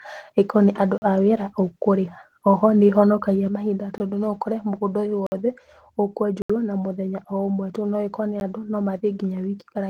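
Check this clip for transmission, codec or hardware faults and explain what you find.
Two faults are present: repeated blocks of digital silence and one sudden gain jump, heard over light Opus voice compression.

Blocks of digital silence: a 40 ms hole at 0.98–1.02 s, just before "a wĩra ũkũrĩha", and further clicks or gaps at 3.98–4.00 s (20 ms), 5.27–5.32 s (55 ms), 6.42–6.50 s (76 ms) and 8.40 s. The audio drops abruptly to nothing and returns without a fade. This happens when a block of samples is zeroed, typically because the output buffer was not filled in time.

Sudden gain jump: at 3.48 s the speech and the background noise both drop by about 7 dB at once and stay lower for the rest of the clip. This is likely a digital gain change applied without a ramp.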